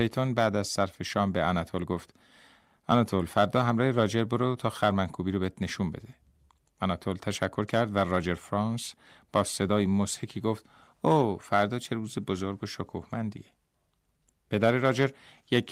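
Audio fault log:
No technical faults are audible in the speech. Nothing in the clip needs a log entry.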